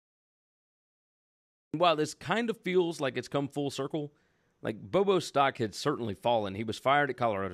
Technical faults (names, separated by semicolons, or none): cut-off start